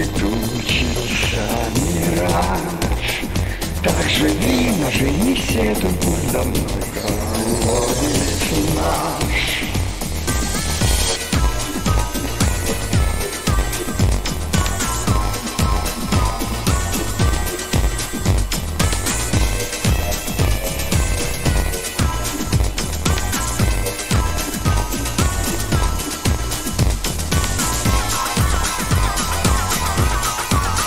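Throughout the clip, one stage hands over blocks shorter than the next stage expects, a block size mismatch (padded), which fits a 512-sample read block topped up with zeros. Each block carries a short silent gap, producing a steady 93.8 Hz buzz, and the audio runs at 0.938 times normal speed while keeping roughly its usual pitch.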